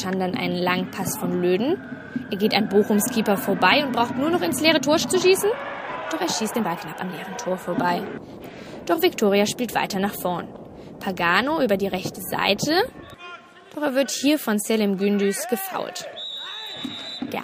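A time-stretched section runs from 4.68 to 7.2 s, sped up 1.36 times with pitch held, likely by dropping short slices, so it sounds rushed.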